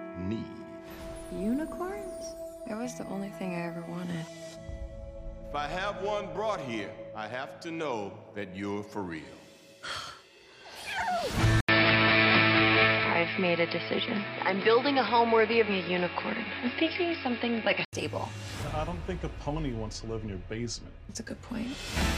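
From 11.6 to 17.9 s the sound turns dull, with nothing above 5.3 kHz, an 80 ms gap at the switch, a noticeable level shift and a new, faint noise floor, which is likely an input switched to a poorer device. A simple filter or codec change would narrow the band without adding the gap, level jump and fresh noise.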